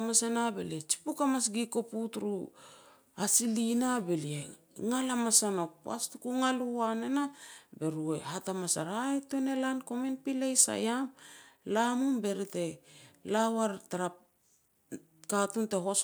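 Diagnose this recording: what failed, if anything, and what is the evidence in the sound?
Nothing stood out on listening to this speech recording, so there is no failed stage to point to.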